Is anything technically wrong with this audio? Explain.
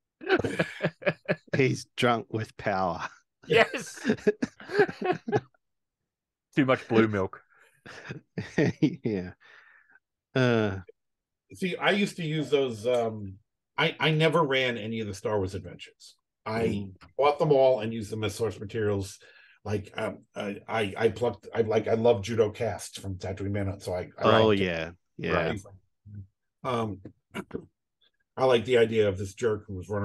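No, nothing technically wrong can be heard anywhere in this audio.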